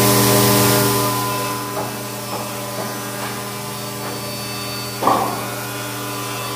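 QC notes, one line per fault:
No faults heard; level changes move smoothly throughout.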